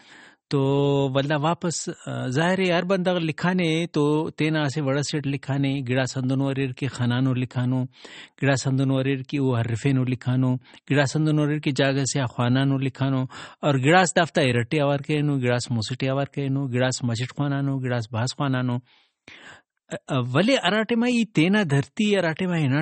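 Throughout, the speech stops dead at 8.4 kHz. It sounds watery and swirly. This is likely MP3 compression, fitting a bitrate near 32 kbps.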